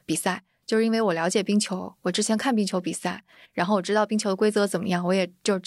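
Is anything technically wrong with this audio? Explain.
No technical faults are audible.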